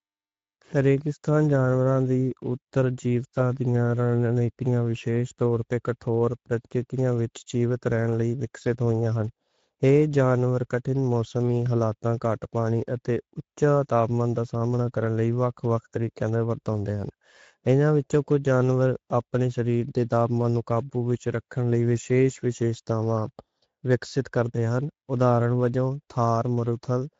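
All the way through, the speech has that hoarse, grainy Speex codec character, plainly audible and consistent with a middling Speex setting around 17 kbps starving the excitation of bits.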